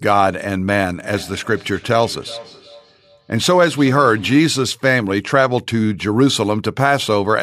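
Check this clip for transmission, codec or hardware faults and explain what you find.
One fault is present. Feedback echo between two devices, 0.96 to 4.55 s: a second device replays this speech into the microphone, so sound returns roughly every 0.4 s, at about -20 dB.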